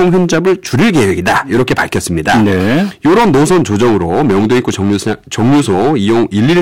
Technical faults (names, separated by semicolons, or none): hard clipping